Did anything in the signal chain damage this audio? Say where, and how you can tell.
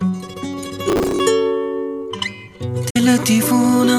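Yes. Processor overload crackle hits the driver or buffer stage from 0.89 to 1.19 s. Gritty crackle comes from repeated stale audio fragments, which fits missed buffers of around 10 ms.

A digital broadcast dropout occurs at reception, 2.90 to 2.96 s. The sound fades out within 8 ms and leaves a 48 ms silence. This points to two frames failing, and the receiver muted until good frames returned.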